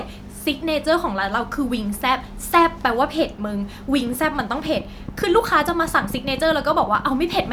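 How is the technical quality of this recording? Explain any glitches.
The recording has one clear fault. From 4.07 s to 7.49 s, a train of clicks runs over the speech. About thirty sharp, similar pops arrive unevenly, near 9.7 per second, peaking a few dB above the speech. Interference from nearby equipment or a faulty connection is the likely cause.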